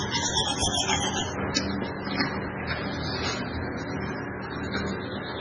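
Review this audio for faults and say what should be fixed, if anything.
Watery, swirling texture with smeared attacks and nothing above 10.2 kHz throughout, likely heavy MP3 compression at a very low bitrate, fitting roughly 16 kbps. Prevent this by encoding at a much higher bitrate or keeping a lossless copy.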